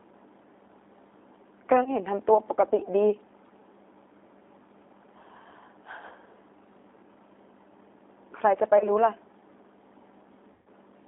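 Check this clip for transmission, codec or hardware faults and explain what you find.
Two faults are audible: codec damage across the whole recording and three short concealed dropouts.

Throughout, the speech sounds thin, slightly rough and synthetic, confined to roughly 250 Hz to 3.7 kHz. That points to the G.729 codec, which at 8 kbit/s rebuilds speech from a vocal tract model and sparse pulses.

At 1.84 to 1.95 s, 8.78 to 8.90 s and 10.53 to 10.68 s, the sound smears into a fading buzzy tone or coloured noise and stays weak briefly afterwards. This is VoIP packet loss concealed by the speech codec: the decoder extended its last pitch and filter across gaps of about 20, 30 and 130 ms, the last clearly longest.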